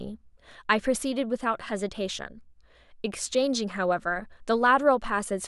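No audible technical faults anywhere in the speech recording.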